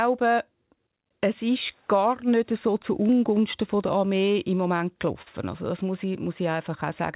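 A brief smear at 4.78 to 4.82 s, and a slightly longer wobble from 5.22 to 5.28 s, mark two instances of short concealed packet loss. In each, roughly 20 and then 40 ms of the speech never arrived in time, so the decoder extended the preceding sound from its pitch or as shaped noise before blending back into the real signal. This happens within a telephone-band call path with nothing above 4 kHz.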